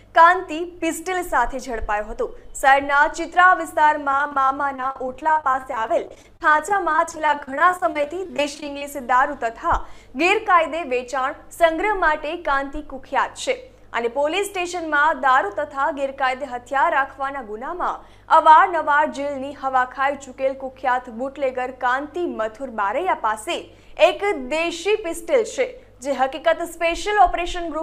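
From 4.11 s to 8.82 s the audio breaks up with repeated packet loss (robotic sound). Data keeps arriving late or not at all, and each hole, none longer than about 41 ms, is bridged by stretching the preceding sound, so roughly a fifth of the stretch is patched-in continuation. It sounds choppy, with pieces missing. Unlike a single dropout, the holes recur densely across the whole span rather than leaving one clean silence.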